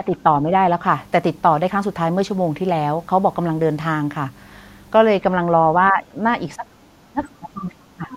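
The speech dips at 5.91 to 6.05 s and 6.56 to 6.66 s, then sinks by roughly 30 dB from 6.86 to 8.12 s. This is speech suppressed in double talk, likely the echo canceller turning both voices down while both sides spoke. A faint second voice, about 20 dB down, slips in at 7.56 to 7.62 s and again from 8.11 s to the end. This is the other side's voice leaking through, likely loudspeaker echo left in the microphone signal.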